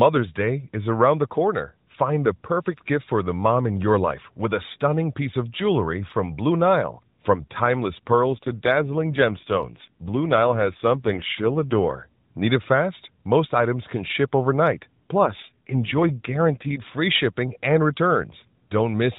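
From 7.98 to 11.96 s, and again from 15.32 to 16.76 s, the speech turns rougher and more synthetic while its narrowband range stays the same and no gap appears. This is an AMR rate drop: the mobile codec was switched to a lower mode to free bits for error protection on a weak link, which fits a fall from 12.2 to 5.9 kbps. Clarity returns to the lightly coloured 12.2 kbps sound between and after.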